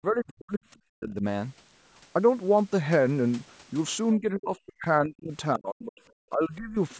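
The speech drops away in six stretches, at 0.0–0.63, 0.93–1.24, 4.19–4.86, 5.03–5.32, 5.55–5.97 and 6.3–6.76 s, falling by about 40 dB at worst and only about 15 dB in the last. This is likely speech suppressed in double talk: an echo canceller unable to separate this side's speech from the overlapping loudspeaker echo, turning both down.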